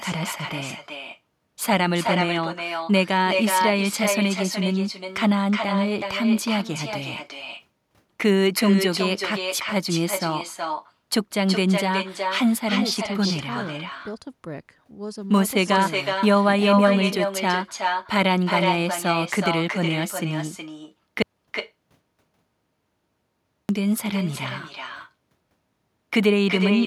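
Throughout the speech, an echo with no canceller returns each phrase about 0.4 s later, about 6 dB down, as a distinct repeat rather than a smeared room reverb tail. From 21.22 to 23.69 s, an audio dropout to silence leaves 2.47 s of silence, not even room tone, likely from a lost input rather than noise gating.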